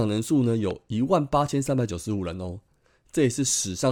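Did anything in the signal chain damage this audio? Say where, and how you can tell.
Yes. A loud pop, most likely a voltage step or spike on the analogue wiring such as a connector being disturbed or a static discharge, enters the speech between 0.71 and 0.73 s. The circuitry downstream shapes that step into a single sharp pulse, peaking about 5 dB above the speech around it, so it is heard as one distinct thump laid on top. The speech continues underneath the pop rather than dropping out, which shows the impulse was added to the signal, not something that broke it.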